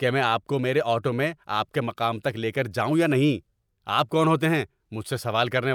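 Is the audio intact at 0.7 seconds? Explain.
Yes, at 0.7 seconds the speech plays through intact, with no fault to be heard at that moment.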